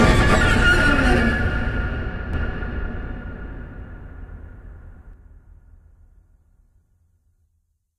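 From 2.33 s to 5.13 s, a doubled audio track appears. A second full-band copy trails roughly 0.4 s behind, about as loud as the original. It has no decay or room colour. It starts and stops abruptly. A slower second capture path or a misaligned edit is the likely cause.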